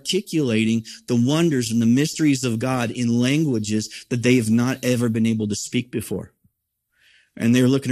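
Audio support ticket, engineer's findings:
Speech, whole clip: dull top end, gurgling granular texture, upper bands flickering in and out. Likely MP2 compression at a low rate, around 80 kbps. Too few bits to go round, so Layer II drops high sub-bands and coarsely quantises the rest. Plainly audible throughout.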